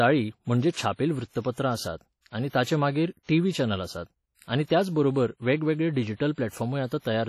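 The whole speech track carries a heavy, washy coding sound. It rings and hisses, and the hiss breathes with the voice. This is likely WMA compression at a low bitrate, near 32 kbps. The noise smears across long blocks and weak detail drops out.

Pre-echo appears four times. A short hiss runs ahead of sharp onsets at 1.40 s, at 2.49 s after "आसात आनी", at 3.23 s after "आनी ताचे नंतर मागीर", and at 6.32 s after "आसात आनी त्याचबरोबर वेगवेगळे". Each hiss lasts 42 to 57 ms. The block's noise leaks before the attack and softens it.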